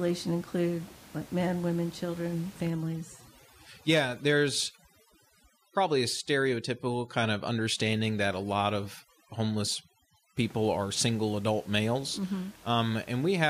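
From 2.7 s, just after "like men women children", until 10.37 s, where "are single adult males" begins, overdone noise removal takes hold. The suppressor is set far too aggressively, so every frequency band that sits close to its noise estimate gets pulled down or switched off, and the softer parts of the speech go with it. The room noise, about 24 dB below the speech, collapses to near silence dotted with twinkling specks. On a spectrogram the background band becomes a dark void scattered with isolated bright dots, the musical noise, and the speech harmonics look ragged, with their upper edges chewed away. In the waveform the gaps between phrases drop almost to a flat line.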